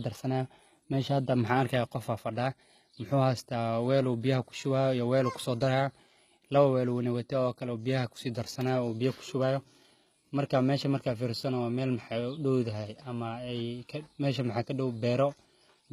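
HE-AAC compression runs through the whole of this speech recording, and the damage is plainly audible. The top of the spectrum sounds synthetic rather than captured: the treble is rebuilt from copies of lower bands and shaped only roughly, so its harmonics don't match the real ones below the crossover. The sound is likely a low-bitrate HE-AAC encode, and the artefacts fit something near 20 kbps. Nothing remains above 14.9 kHz.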